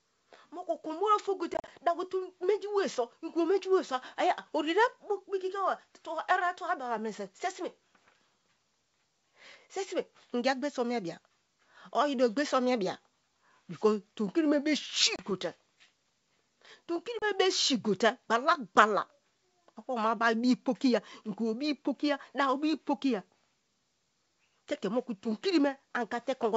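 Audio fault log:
1.54–1.70 s, packet loss on an ADPCM call: about 80 ms of sound drops to silence in gaps scattered across 140 ms, the longest 40 ms, roughly seven packets. Each hard-edged hole leaves the decoder's predictor and step size out of step with the sender, so sound resumes with brief, slight distortion.
15.16–15.24 s, packet loss on an ADPCM call: about 30 ms lost, roughly three packets, heard as an abrupt silent gap followed by the same mistracked recovery before the adaptive state resettles.
17.19–17.24 s, packet loss on an ADPCM call: about 30 ms lost, roughly three packets, just before "be si", with the same hard cut and slightly distorted return as the decoder resynchronises.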